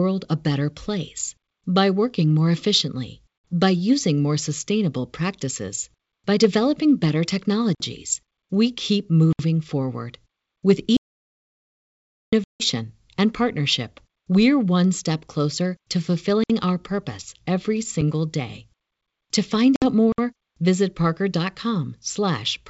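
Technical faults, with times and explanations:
3.45 s, 12.44 s and 19.76 s: packet loss on an ADPCM call. Holes of 60 ms, 160 ms and 60 ms, which fits roughly three, seven and three packets, with the first falling between "by working more efficiently" and "by using more sustainable". The decoder's predictor and step size lose track of the sender's, so speech resumes slightly distorted for some tens of milliseconds. The waveform shows flat gaps with square edges, then a jumpy, mis-scaled stretch before settling.
7.75 s, 9.33 s, 16.44 s and 20.12 s: block of digital silence. Gaps of about 52 ms, 64 ms, 60 ms and 60 ms, the first right after "practices by developing better" and the third between "one step closer to" and "our purpose every". The sound drops straight to silence and back with no fade, pointing to an output buffer not filled in time. These sound like short holes. On a spectrogram each is a blank vertical stripe bordered by thin full-band lines.
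10.97 to 12.33 s: audio dropout to silence. For about 1.36 s the sound cuts off mid-flow and returns abruptly, with nothing left, not even room tone, and whatever was said in between is gone. The likely cause is lost input, such as a disconnected device or failed link, while recording continued writing silence. The waveform is a dead-flat line and the spectrogram a fully empty block, unlike the faint hiss of the G.722 upper band around it.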